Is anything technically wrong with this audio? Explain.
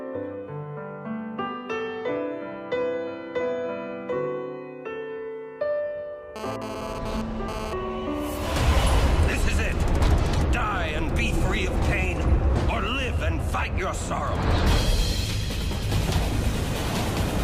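Yes. From 6.36 to 7.73 s there's GSM phone buzz: a nearby phone's data bursts, rectified by the circuitry, give a harsh 217 Hz buzz about 9 dB below the sound.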